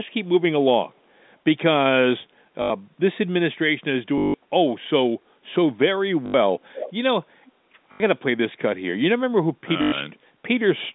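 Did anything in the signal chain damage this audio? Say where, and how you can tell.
Yes. Packet loss with last packet repeated, at the network stage, appears at 2.62–2.7, 4.18–4.34, 6.26–6.34, 7.92–8.0 and 9.82–9.92 s. Each gap of 80 to 160 ms is filled by a 50 Hz robotic stutter, which fits repeated 20 ms packets. A plain dropout would leave silence instead.

An echo leak, likely from a loudspeaker-side echo canceller letting audio through during call processing, returns a delayed copy about 408 ms late at 6.74–6.93 s, about 15 dB down, and very faintly at 7.45–7.52 s. Its single fixed delay distinguishes it from room reverberation's smeared tail.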